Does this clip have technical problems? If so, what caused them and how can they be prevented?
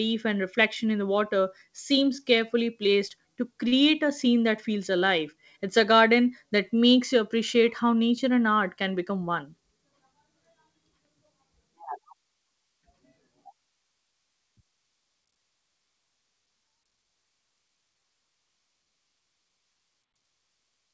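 Yes, two. A short stall from a late packet at 3.68 to 3.74 s, after "seems carefully placed to": the buffer ran dry and 41 ms got stretched, nothing lost. A steadier network or a slightly deeper jitter buffer prevents it.

Then a jitter buffer speed-up at 9.04 to 9.44 s, after "nature and art can": bunched packets were drained by trimming pitch periods, around 40 ms, so the speech runs about 109% fast. Smoother packet delivery avoids it.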